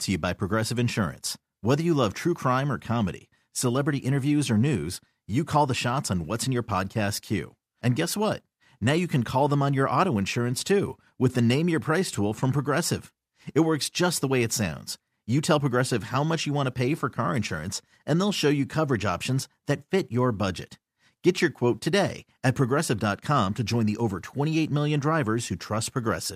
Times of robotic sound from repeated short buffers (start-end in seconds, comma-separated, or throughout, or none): none